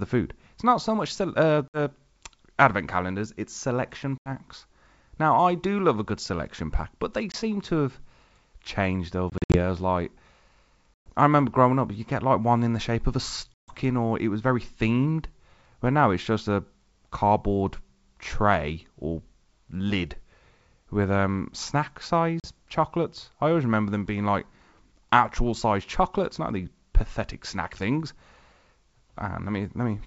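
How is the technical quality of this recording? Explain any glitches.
The recording has seven dropouts from packet loss on an ADPCM call. It is wideband speech, and the bandwidth fits G.722 coding. Packets went missing at 1.68 s (60 ms), 4.18 s (80 ms), 7.32 s (20 ms), 9.30 to 9.62 s (140 ms in bursts over 240 ms), 10.96 s (120 ms), 13.55 s (140 ms) and 22.40 s (40 ms). Each gap was filled with silence, which leaves hard-edged holes. The decoder's adaptive predictor and step size then no longer match the sender's, so the speech comes back and sounds briefly distorted until it realigns within some tens of milliseconds.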